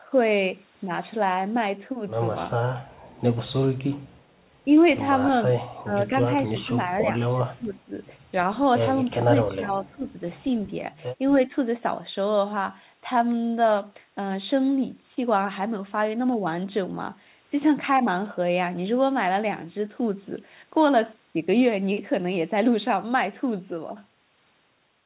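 Four short dips hit the speech, at 5.83 to 5.94 s, 6.5 to 7.1 s, 7.34 to 7.94 s and 9.15 to 10.05 s. Level falls by up to about 20 dB. This is likely speech suppressed in double talk. The echo canceller confused overlapping talk with echo and turned both down.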